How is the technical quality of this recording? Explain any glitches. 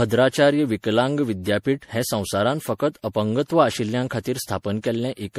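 The recording is marred by generation loss throughout the speech. Swirly, hollow smearing and blurred consonant attacks exceed what one 64 kbit/s MP3 pass would cause, likely from around five re-encodes, each requantising on a shifted frame grid so that noise and spectral holes accumulate.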